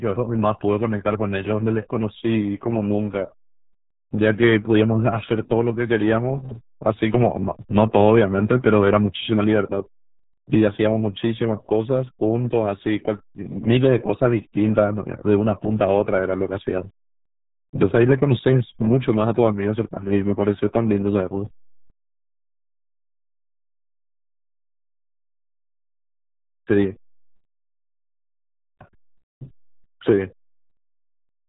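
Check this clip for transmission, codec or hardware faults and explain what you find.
One fault runs through the whole clip: RealAudio 14.4 codec damage. The speech sounds muffled and gargly from start to finish, with a thick, bubbling texture on every syllable and no air or sparkle at all, because nothing above 3.8 kHz survives. The heavy smearing points to a very low bitrate, around 8 kbit/s, which fits RealAudio 1, a dial-up-era speech coder. It throws away the upper band and rebuilds the rest from a coarse model, producing that gurgling quality.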